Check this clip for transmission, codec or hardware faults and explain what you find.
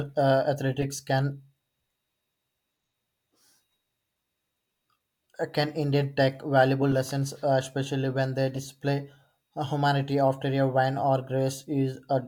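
Three short chirp-like bursts stand out in the speech: at 0.81–0.84 s, at 6.92 s, and at 8.55–8.58 s, with error peaks of roughly -20, -20 and -25 dBFS. This is a corrupt frame decoded: flipped bits in compressed frames were played anyway, misplacing energy in frequency for a few frames each time.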